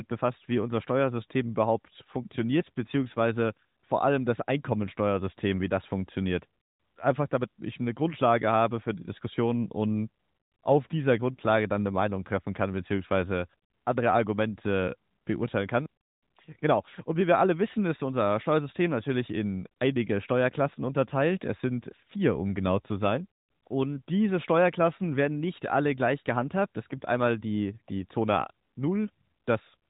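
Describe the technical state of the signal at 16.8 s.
At 16.8 s the speech is intact, with no dropout, click or other fault, only the closed-off, telephone-band sound of the AMR narrowband mobile codec, which passes nothing above about 3.8 kHz.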